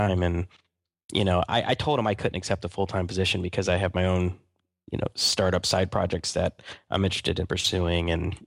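No technical faults are audible at any point in the recording.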